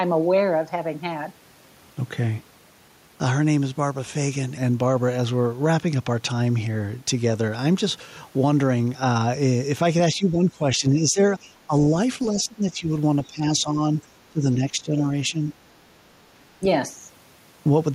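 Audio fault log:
10.15 to 16.65 s, speech suppressed in double talk: the speech drops in patches at 10.15–11.96, 12.32–12.88, 13.27–13.81, 14.30–15.38 and 16.60–16.65 s. Dips reach about 10 to 15 dB, deepest in the second and fourth patches. The level sinks unevenly, so the talker seems to fade out in pieces. This is likely an echo canceller facing both sides at once, turning down the near talker along with the echo.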